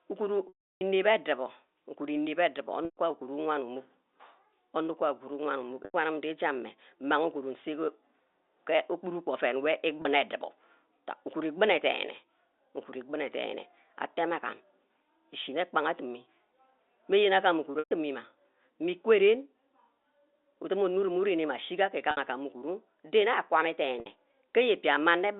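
Speech over a G.711 telephone line, band-limited to roughly 250 Hz to 3.7 kHz, with packet loss with pitch repetition at 0.48, 2.85, 5.85, 10.02, 17.79, 22.11 and 24.0 s. The 30 ms gap at 10.02 s becomes a briefly held, buzzy repeat of the last pitch period, while the longer losses of 60 to 120 ms and the 330 ms loss at 0.48 s fade into silence before a short cross-fade back.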